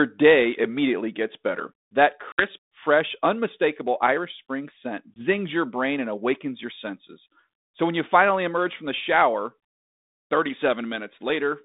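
Packet loss on an ADPCM call hits at 2.32–2.47 s and 5.14–5.24 s. Hard 60 ms and 20 ms silences cut in. The decoder's predictor loses step, so speech returns briefly distorted.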